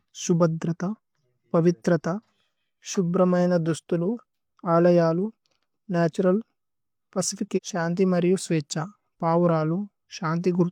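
A segment of the stream likely failed to load at about 7.53 to 7.59 s, and the player moved straight on to the next one, a stream segment skipped. A stretch of the speech is simply missing: it jumps ahead abruptly, with a small blip, landing on "ശന്തി മരിയു".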